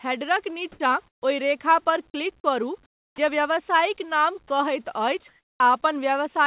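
From 0.72 to 0.80 s and again from 1.08 to 1.22 s, shortly before "ओहि रेखा पर", the background becomes flat, featureless hiss: comfort noise in place of the background, likely from discontinuous transmission. It is about 10 dB louder in the first gap and about 15 dB quieter in the second.

From 2.86 to 3.18 s, a 320 ms stretch of the same synthetic noise sits about 19 dB below the real background. Over its final 70 ms, 3.11 to 3.18 s, the following sound is missing. This is an onset clipped by the voice detector, likely because it reacted late, so the sound starts abruptly with no soft lead-in.

From 4.48 to 4.50 s, about 10 ms of sound is dropped by the voice detector, likely mistaken for background, and is briefly replaced with noise.

From 5.28 to 5.60 s, comfort noise again replaces the background for 320 ms, about 5 dB quieter.

Throughout, the G.711 A-law call path at 64 kbps leaves nothing above 4 kHz.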